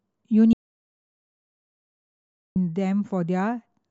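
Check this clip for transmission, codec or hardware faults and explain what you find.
One fault stands out: an audio dropout to silence running from 0.53 s to 2.56 s, removing about 2.03 s of the speech. The input was likely lost, through a disconnected device, failed link or accidental mute, while recording continued writing silence. The speech cuts off abruptly and resumes just as abruptly, with dead silence between, not even room tone. On a waveform this is a flat line; a spectrogram shows a dark band across all frequencies.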